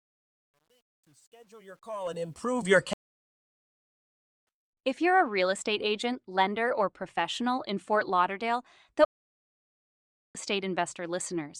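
The fade-in over the first 2.72 s passes through a volume stage that keeps too few bits and adds no dither, which fits a 10-bit path. This is truncation distortion on a fade. From 0.0 to about 2.05 s the quiet speech turns gritty before the level rises clear.

At 2.93 s a stream reconnect occurs. The connection drops, leaving 1.54 s of silence until 4.47 s, and a fresh decoder then picks up roughly 1.5 s further on. A second reconnect at 9.05 s silences the audio for 1.30 s until 10.35 s, and the speech resumes about a second later than where it stopped.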